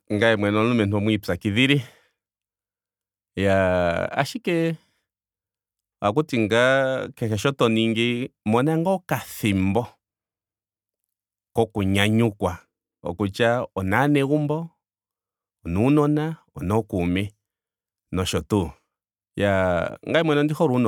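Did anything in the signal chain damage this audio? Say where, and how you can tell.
No, no signal-chain damage detected.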